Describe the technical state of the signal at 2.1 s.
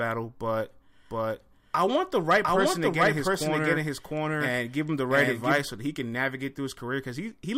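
At 2.1 s the speech is affected by a doubled audio track, present from 1.11 s to 5.59 s. A second, full-band copy of the same speech trails the original by roughly 0.7 s, at about the same level, so the two lines overlap and compete. The copy carries no decay or room colouring, and it cuts in and out abruptly at the span edges. The likely cause is a slower capture path recording the signal twice.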